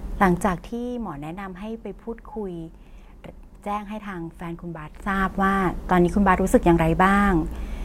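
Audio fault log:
0.44–0.81 s, zipper noise: over this stretch the speech is pulled down by roughly 15 dB in 1 dB steps, about 40 a second, with no smoothing between them. Each jump in gain leaves a tiny discontinuity, so a fast ticking, zipping texture rides on the sound while the level falls. On a waveform the envelope descends as a staircase, and a spectrogram shows faint evenly spaced broadband vertical lines through the fade.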